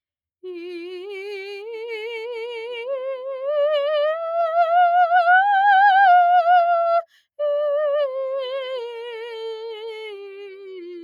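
Music, with no technical faults.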